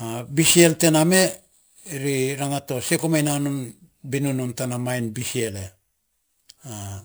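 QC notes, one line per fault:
Throughout, crude rate conversion: nearest-sample repetition, which fits a 32 kHz to 44.1 kHz jump, leaves inharmonic fizz about 15 dB below the speech, riding loud and sibilant passages.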